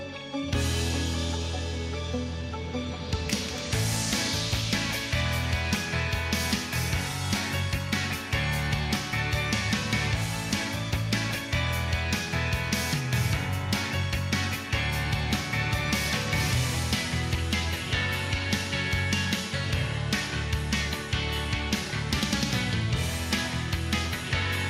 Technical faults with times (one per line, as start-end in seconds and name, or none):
none